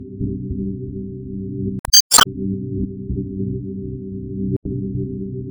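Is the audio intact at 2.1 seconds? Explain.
No. Damaged data in a compressed stream runs from 1.79 to 2.14 s, so 2.1 s falls inside it. Part of the encoded stream is corrupt there, and the decoder misreads the affected frames, loses its place and hunts for the next valid frame header before it can resume. The result is a short glitch in place of the sound.

Underneath that, the whole clip carries a watery, swirling quality, likely from MP3 compression at a low bitrate around 64 kbps. The encoder lets weak frequency components flicker on and off from frame to frame, which produces that swirl and smears sharp attacks.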